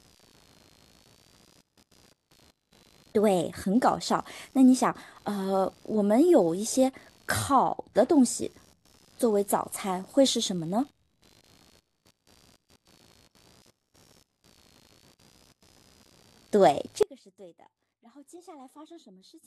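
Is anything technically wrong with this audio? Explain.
Yes. Two faults are present.

Computer activity noise runs through the whole speech clip. It is a buzzy, chirping texture pulsing at roughly 70 times a second. It sits about 35 dB below the speech. Processor, graphics or mouse load shifts the ground that the audio circuit shares. The noise follows the computer's activity rather than the speech. So it rises and falls on its own, whatever is being said.

At 17.03 s the speech cuts out abruptly. This is an audio dropout to a faint residue. It lasts to the end, about 2.4 s. The change is a sudden break, not a pause or fade. What remains is a faint leak of the sound, roughly 25 dB below its normal level. The likely cause is the wanted signal being lost upstream. The path after the break stayed live and carried only this residue.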